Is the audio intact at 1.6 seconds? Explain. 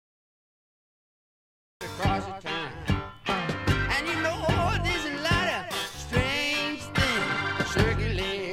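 No, there is a cut-off start: capture began late, so 0 to 1.81 s is digital silence, and the sound then enters abruptly mid-event with no natural attack.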